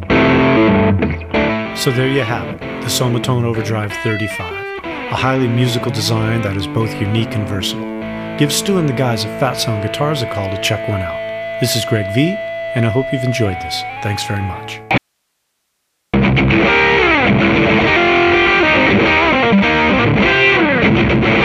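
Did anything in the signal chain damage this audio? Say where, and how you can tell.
Yes. There's an audio dropout to a faint residue from 14.98 to 16.14 s. The sound cuts out abruptly for about 1.16 s, leaving only hiss somewhere around 55 dB down, then snaps back. Since the path stayed live, it's likely an intermittent analogue connection upstream.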